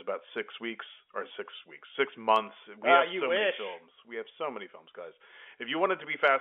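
There are no technical faults to describe in this speech clip, which comes through a G.711 telephone line working as expected.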